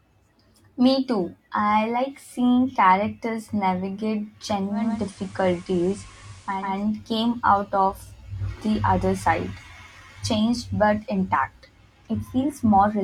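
Digital radio blending to analogue runs from 4.67 s to 6.76 s, starting after "like seeing characters navigate" and returning before "came out of the". The receiver lost its digital stream and cross-faded, over about 378 ms, to the station's FM broadcast. A hiss floor appears roughly 30 dB under the signal, and the level shifts by about 2 dB until the digital feed resumes.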